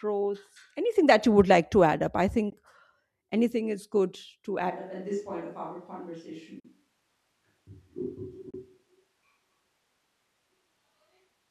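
A speech recording with two kinds of fault. Late audio packets were likely dropped on a Bluetooth link, causing Bluetooth dropouts: abrupt silent holes at 2.50 to 2.53 s (after "to add up I"), 6.60 to 6.65 s and 8.50 to 8.54 s, losing about 15, 44 and 29 ms, with the speech resuming as if it had played on. From 4.72 s (after "anything is good to") to the end, the close microphone's signal is likely lost and a more distant microphone takes over. The sound turns suddenly roomy and hollow, about 10 dB quieter, with room noise roughly 35 dB below the speech.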